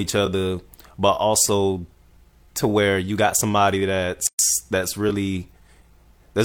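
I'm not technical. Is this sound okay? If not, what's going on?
No. At 4.27 s the speech drops out completely for about 0.12 s, until 4.39 s, then picks up exactly where it stopped. This is a gap at a join of encoded pieces. The recording was compressed in separate chunks and glued back together without trimming, so the short stretch of silence each chunk carries at its start and end was left in. The edges of the gap are smeared, so the fully silent part is shorter than that.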